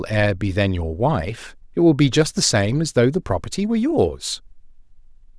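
No technical fault can be heard anywhere in the recording. There is nothing to mark at any point in the speech.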